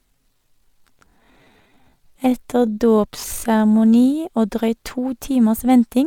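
From 0 to 4.24 s the speech is a time-stretched section, slowed to about 0.65x at unchanged pitch, sounding dragged until "og drøyt to timers", likely from length-fitting software.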